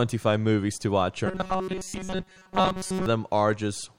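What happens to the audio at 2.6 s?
At 2.6 s the speech is inside a stretch of robotic sound from repeated short buffers, running from 1.26 s, just after "movies to watch", to 3.06 s. The audio has turned into a rigid, metallic buzz at 188 Hz that only loosely tracks the speech. The likely cause is new audio arriving too seldom, so a snippet of about 5.3 ms is replayed over and over while most of the real signal is skipped.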